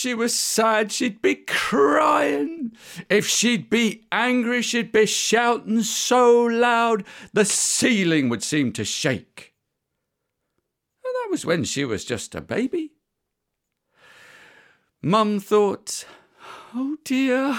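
No technical faults are audible.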